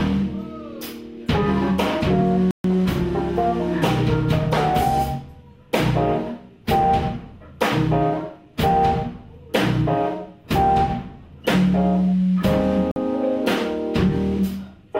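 At 2.51 s the audio drops to silence for about 135 ms, resuming at 2.64 s; a shorter gap of about 49 ms follows at 12.91 s, ending at 12.96 s. Both are clean cuts to silence followed by a restart. This pattern is likely a Bluetooth stall: radio interference delays packets, the receiving buffer empties, and playback halts until retransmitted data arrives, then continues from the held position or slightly beyond it.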